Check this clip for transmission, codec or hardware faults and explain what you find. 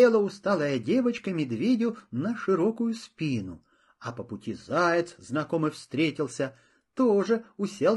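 There's one codec fault, and it runs the whole way through. The speech has plainly audible low-delay AAC compression damage: it sounds rough and grainy, with noise filling the gaps between harmonics and a thin, synthetic top end. That's likely AAC-ELD, the video-call codec, whose short frames smear pitch detail and burn bits, and the amount of damage fits a fairly low rate around 32 kbps.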